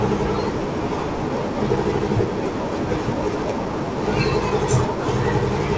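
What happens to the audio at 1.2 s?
A skip ahead at about 1.20–1.30 s: roughly a second of audio is dropped and playback jumps forward, showing as an abrupt waveform and spectrogram discontinuity with no silent gap.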